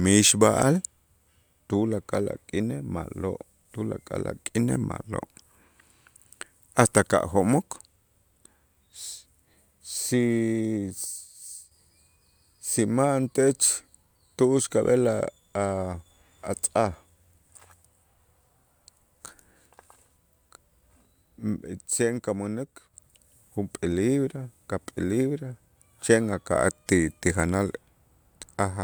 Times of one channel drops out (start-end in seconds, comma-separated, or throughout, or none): 11.05-11.71, 21.91-22.94